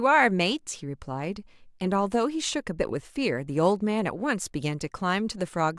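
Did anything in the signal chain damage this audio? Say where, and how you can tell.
No, nothing along the signal chain audibly damaged this speech recording, and the signal holds steady with no breaks, distortion or disturbances at any point.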